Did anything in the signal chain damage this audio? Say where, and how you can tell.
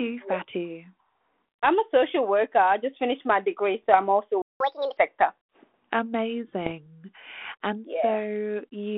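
Yes. A sharp pop at 3.93 s, between "finished my degree so" and "I'm also", and a rough, crackling burst from 6.61 to 6.72 s with a brief level wobble point to bit errors on an ADPCM link. Each flipped bit throws off the decoder's step size and predictor, so the damage rings on briefly. The narrow telephone band of the G.726 link, which fits 32 kbit/s, carries these errors.

The audio stops dead from 4.42 to 4.60 s, a gap of about 183 ms just after "degree so I'm also". This is a playback stall, likely from the player's buffer running dry or its thread being blocked, so output fell silent until data arrived again.

Right after the gap, from 4.60 to 4.97 s, the speech rushes at 1.5 times normal speed and jumps up about 7 semitones before settling back. This is catch-up at higher speed: the player resampled its backlog faster to recover the time lost in the stall.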